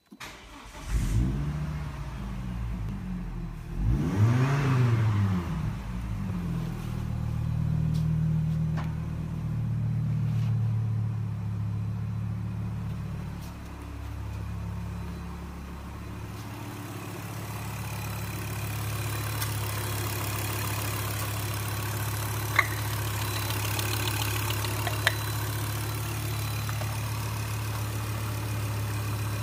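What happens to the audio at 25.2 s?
At 25.2 s the audio plays through intact, with no fault at that moment.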